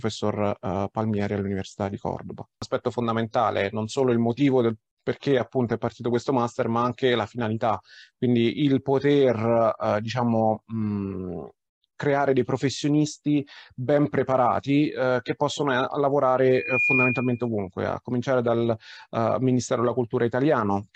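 At 16.50 s a loudspeaker feedback squeal begins. A microphone is picking up its own loudspeaker, and the loop runs away at one frequency. A 2.4 kHz tone swells over about a third of a second, rising a little above the surrounding sound. It stops at 17.48 s.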